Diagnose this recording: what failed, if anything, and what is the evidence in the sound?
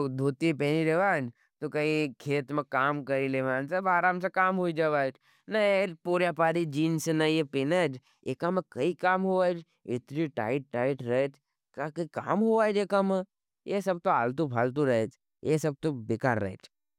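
Nothing failed; no fault can be heard anywhere.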